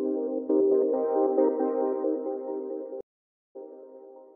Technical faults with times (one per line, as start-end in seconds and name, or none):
3.01-3.56 stream reconnect